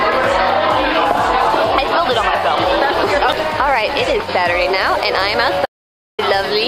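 At 5.66 s the input signal was likely lost through a broken link or stray mute, while the recorder kept writing zeros. This audio dropout to silence cuts the sound off abruptly for 0.53 s of dead silence, with no room tone, until it resumes mid-flow at 6.19 s.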